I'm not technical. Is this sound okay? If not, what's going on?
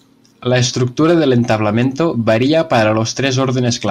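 Yes, this recording is fine, with no dropouts, crackles, distortion or other technical glitches to worry about.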